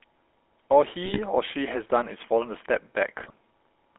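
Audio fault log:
throughout: GSM full-rate codec. The speech has the gravelly, buzzy texture of the first GSM coder, whose rough character fits a 13 kbps stream. That coder rebuilds each stretch from a vocal-tract filter driven by a sparse, regularly spaced pulse train, so the fine grain of the voice turns coarse. The line band runs from 250 Hz to 3.4 kHz. A spectrogram shows an empty region above 3.4 kHz and below 250 Hz, with smeared, blocky harmonics in between.
1.02–1.19 s and 3.20–3.35 s: GSM bit errors. In each burst the voice breaks into squawking, popping and gargling for roughly a sixth of a second, which points to a run of corrupted 20 ms frames on a weak link. Flipped bits in the filter, pitch and gain values send the decoder wrong, twisting the spectrum and throwing the level about from frame to frame. On a waveform these show as sudden amplitude jumps. On a spectrogram they appear as short, frame-wide blocks of distorted, misplaced energy.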